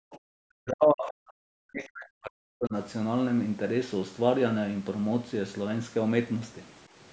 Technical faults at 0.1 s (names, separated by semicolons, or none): background gated by the echo canceller; other side's voice leaking through